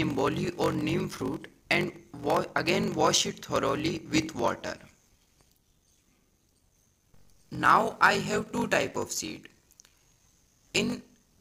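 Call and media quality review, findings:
Block size mismatch (padded), throughout. Buzz at 46.9 Hz; playback runs at 0.861x speed, pitch about normal. Upstream stage writes short blocks, zeros pad the remainder; the gap rate fits a 1024-sample read block in the downstream stage.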